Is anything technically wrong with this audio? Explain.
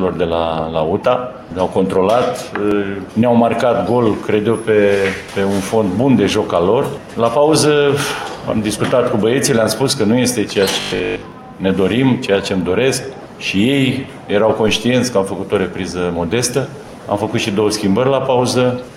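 Yes, there are two separate faults.

From 10.8 to 11.32 s there's robotic sound from repeated short buffers. For about half a second the audio takes on a rigid, metallic buzz at 50 Hz, and the contour underneath comes through only roughly. The likely cause is audio arriving too late, with the playback side filling the gaps by looping a short chunk. A 50 Hz buzz points to a repeated segment of about 20 ms, and most of that stretch, something like two thirds or more, sounds like repetition rather than fresh material.

At 14.68 s there's a DC step. The waveform's zero line suddenly jumps, and you hear a single low thump or click while the sound carries on unchanged. The offset then dies away gradually, behaving the way a roughly 2 Hz high-pass would pull it back to centre, so it's a brief bump rather than a lasting shift.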